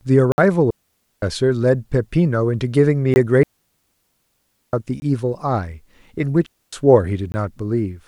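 At 0.32 to 0.38 s the speech cuts abruptly into a 60 ms block of digital silence, likely where the output buffer was not filled in time, and a hard-edged hole is left. From 0.71 to 1.22 s a digital wireless dropout mutes the receiver for about 0.52 s, a clean near-silent gap with a very short fade and no noise burst. A 20 ms block of digital silence recurs at 3.14 to 3.16 s and is heard as a short hole. A longer digital wireless dropout follows at 3.43 to 4.73 s and lasts 1.3 s. Another 20 ms block of digital silence falls at 5.00 to 5.02 s. A digital wireless dropout at 6.46 to 6.73 s mutes for about 0.26 s. A final 20 ms block of digital silence sits at 7.32 to 7.34 s.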